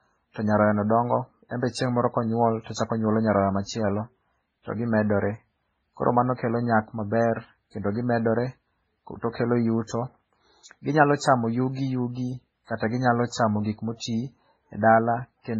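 Speech with transcoding between lossy codecs running throughout: nothing above 9 kHz, with low-bitrate MP3-style smearing overlaid by a second codec's own artefacts, which points to a 16 kbit/s MP3 likely re-encoded to 48 kbit/s WMA. The two stacked artefact types distinguish it from single-codec compression.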